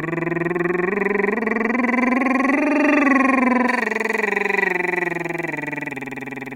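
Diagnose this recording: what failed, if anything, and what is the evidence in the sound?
From 3.68 s to the end at 6.55 s, the music turns thin, bright and hissy, with treble up about 11 dB at 10 kHz against 1 kHz. That's pre-emphasis left on: a J.17-style boost from transmission whose matching de-emphasis never ran at playback.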